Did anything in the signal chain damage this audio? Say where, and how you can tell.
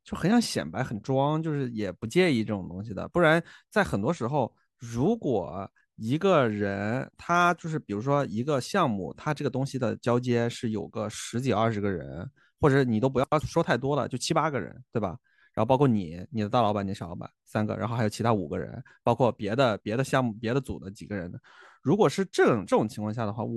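Yes: frames out of order at 13.24 to 13.41 s in the network or codec stage. Two adjacent runs of about 85 ms, likely four frames each, play swapped, causing a garbled flutter.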